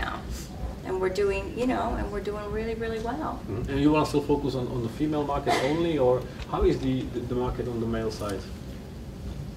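No technical faults are audible anywhere in this audio.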